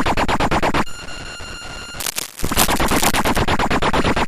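Cable scratch noise runs from 2.0 to 3.39 s, a stretch of dense, uneven crackle and rustle laid over the sound, sitting only a little below the level of the sound itself. The likely cause is a worn cable, connector or control carrying a DC voltage being moved, so its contact resistance jumps about rapidly and injects irregular bursts of noise into the signal until the movement stops.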